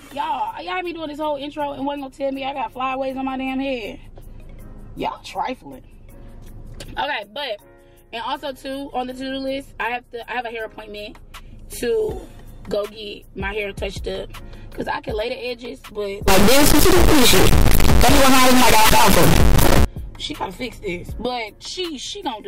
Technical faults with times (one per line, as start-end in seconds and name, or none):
16.28-19.85 integer read as float